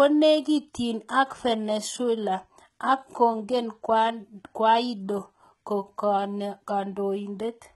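From start to finish, the speech carries heavy codec damage, likely from HE-AAC compression at a rate that fits roughly 16 kbps. The treble is not the original. Lower bands are copied upward and shaped only coarsely, so harmonics fail to line up across the crossover, and s sounds come out gritty, metallic and lispy. A spectrogram would show a repeated, smeared texture in the upper band and nothing at all above 11.8 kHz.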